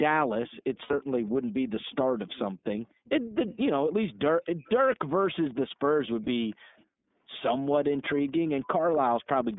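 The iLBC codec runs throughout: the speech is confined to roughly 200 Hz to 3.6 kHz and carries a plainly audible rough, synthetic edge, which fits 13.33 kbps iLBC with 30 ms frames, each coded independently of the one before.

Echo leak comes in at 0.48 to 2.39 s, 3.05 to 3.57 s, 4.44 to 5.26 s, 5.99 to 6.84 s, 7.96 to 8.97 s and 9.50 to 9.56 s: a faint copy of the speech trailing 252 ms behind. It is likely a far-end loudspeaker whose echo canceller let part of it through.

Lost iLBC frames appear at 0.83 s for 60 ms and at 6.24 s for 30 ms, which fits two frames and then one. The decoder bridges each gap by repeating the last pitch cycle, so it sounds like a brief held, buzzy vowel before the speech snaps back.

Background gated by the echo canceller occurs between 6.56 and 7.10 s, affecting a little under half a second in total. The canceller clamps the microphone while the loudspeaker is active, so the room sound dips by up to about 28 dB and then returns.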